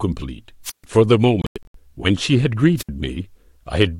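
At 0.64 to 0.84 s and again at 2.77 to 2.89 s the speech shows a wireless microphone squelch dropout. The fading radio signal lets hiss swell before the receiver mutes for about 141 ms, then about 73 ms. On a spectrogram, broadband noise haze precedes a blank vertical band.

From 1.42 to 1.76 s, gaps totalling 209 ms are scattered across 325 ms, the longest 93 ms. This is likely a Bluetooth dropout, late packets discarded. Speech jumps ahead after each hole, and the waveform shows flat, sharp-edged silences.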